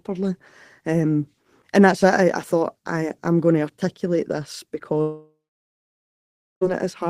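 A long network dropout runs from 5.01 to 6.63 s, right after "going to articulate this". The most likely cause is that no packets reached the receiver for about 1.6 s, so that stretch of speech was never played. The receiver briefly extends the last sound as a fading buzz or hiss, then about 1.26 s of near-silence remains before the speech resumes, with the missing portion gone.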